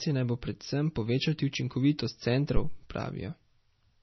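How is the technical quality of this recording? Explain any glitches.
The recording has heavy codec damage across the whole speech clip. From start to finish it carries what is likely MP3 compression. Weak frequency lines drop in and out between frames, giving a watery, swirling texture, and nothing is present above 5.9 kHz, which fits a low bitrate around 24 kbps. A simple low-pass filter would only dull the top end. This clip also has shifting metallic chirps on s sounds and smeared consonant attacks.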